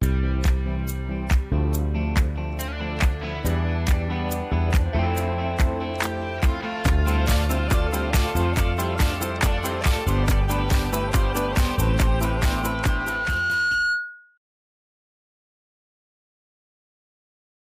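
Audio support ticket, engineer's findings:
Loudspeaker feedback squeal, 12.23–14.38 s: 1.4 kHz tone swells over roughly 1.5 s to about signal level; mic-speaker loop gain exceeds one. Grows, unlike a steady whine.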